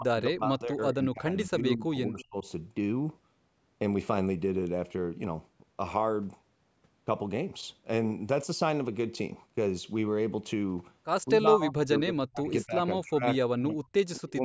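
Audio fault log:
0.00–2.46 s, speech suppressed in double talk: the speech sinks by about 25 dB across roughly two seconds, thinning and breaking into fragments. The likely cause is an echo canceller confusing simultaneous far-end talk with echo and attenuating the near talker along with it.
11.29–12.82 s, 12.98–13.24 s, 13.50–13.93 s and 14.16–14.38 s, speech suppressed in double talk: four successive cutouts drop the speech by about 30 dB, deepening to about 40 dB in the last two. The likely cause is suppression gating the talker while the other side speaks.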